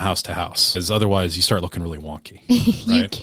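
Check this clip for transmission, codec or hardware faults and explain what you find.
Two transmission faults show up, both arising in transmission rather than the codec or hardware.

At 0.75 to 0.77 s there's a skip ahead. Roughly 0.7 s of speech got dropped while later audio was already queued, so playback leaps forward and the two edges are stitched together with no gap at all. You hear an abrupt jump in the speech.

From 1.03 to 2.87 s you get a jitter buffer speed-up. The buffer was holding more than its target, so the receiver kept trimming tiny pitch-period-sized slices, about 150 ms in total. The speech runs at 109% speed with the pitch unchanged, and it comes across as rushed.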